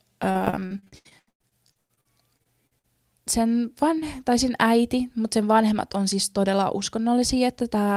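Repeated packet loss from 0.31 to 2.86 s leaves over twenty gaps, up to 120 ms, patched with repeated sound, making the speech choppy and robotic.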